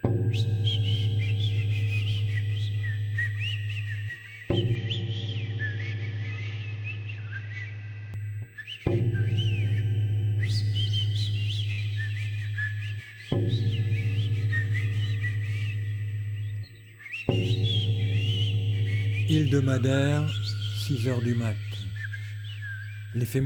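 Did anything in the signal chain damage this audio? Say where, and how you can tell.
Yes, at the capture stage. From 4.75 to 8.14 s the audio suddenly loses everything above 6.9 kHz, drops about 5 dB in level, and picks up a new background noise roughly 30 dB below the signal. It then clears again with no gap at either edge. The likely cause is an input switched to a poorer device. A codec stepping down its bandwidth would narrow the band without also changing level, tone and noise floor together like this.

There is also a burst of packet loss on the network path at 11.71 to 11.80 s. About 61 ms is filled by concealment, which stretches the last sound and fades it out. The audio then resumes with about 60 ms of material skipped. A buffer underrun or local dropout would give silence or a click with nothing missing. Here the gap is smoothed over, and content is lost from the timeline.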